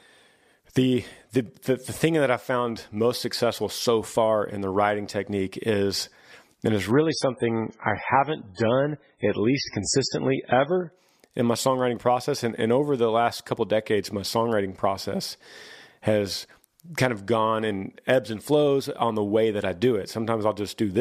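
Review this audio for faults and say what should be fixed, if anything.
The speech has an adaptive stream at a lower bitrate from 6.91 to 10.91 s, after "technique is and it's" and before "in my songwriting process". The quality drops suddenly with no gap. Nothing remains above 10.3 kHz and codec artefacts rise. That fits a switch to about a 16 kbit/s MP3 rendition. Fix it by buffering further ahead or fetching the segments again at the higher bitrate.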